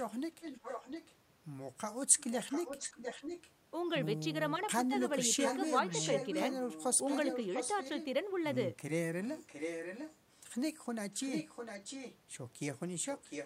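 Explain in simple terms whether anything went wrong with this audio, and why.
Echo leak: the other side was likely on a loudspeaker, and its echo canceller let some sound slip back. You hear a copy trailing about 0.7 seconds behind, at 0.41–1.15, 2.17–3.51, 5.39–8.05, 9.25–10.43, 11.11–12.18 and from 13.05 to the end.

Speech suppressed in double talk: with both sides sounding at once, the echo canceller likely turned everything down. The speech briefly dips in level at 4.88–4.93.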